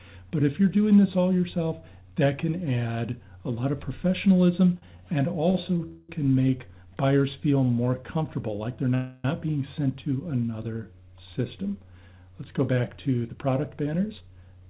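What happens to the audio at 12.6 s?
Nothing goes wrong at 12.6 s: the audio there carries through intact, with only the narrow band-limit of the call path, which has nothing above 4 kHz.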